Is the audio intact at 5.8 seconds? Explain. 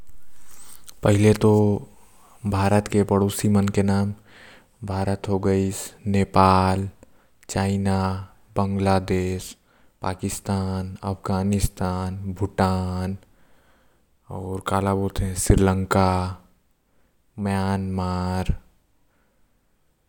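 Yes, the speech at 5.8 seconds is intact, with no dropout, click, distortion or other fault at that moment.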